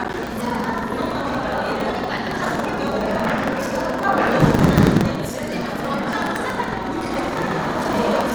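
Buffer tearing runs through the whole of this everyday-sound recording, heard as a steady robotic rattle at about 21.5 Hz, a repeat rate that fits a 2048-sample buffer. The software filling the ring buffer and the hardware draining it have drifted out of step, so their positions cross within every period. About a fifth of each buffer therefore replays audio from roughly 150 ms earlier, with abrupt joins at both edges, and the rattle rides on the sound itself.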